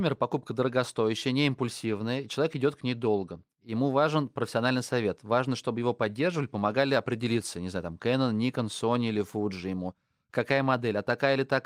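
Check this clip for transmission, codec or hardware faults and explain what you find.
Nothing here points to a transmission, codec or hardware problem; the speech comes through steady and intact the whole way, with nothing that needs explaining.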